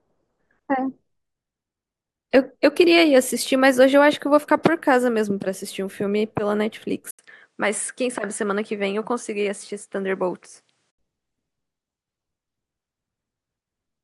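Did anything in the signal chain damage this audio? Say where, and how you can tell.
Yes. From 7.11 s to 10.99 s the recording likely switched its input to a poorer device at the driver level, then switched back. At 7.11 s there is an 80 ms gap, after which nothing above 10.9 kHz gets through, the level drops by about 5 dB, and a faint new noise floor appears. The narrower, duller tone holds until the input switched back to the original device at 10.99 s.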